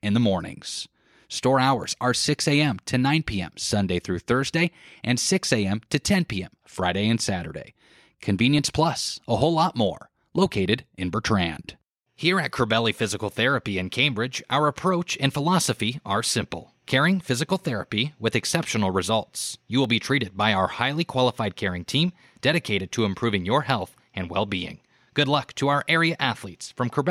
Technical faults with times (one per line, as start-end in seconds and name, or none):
1.84-26.60 clock drift buffer slips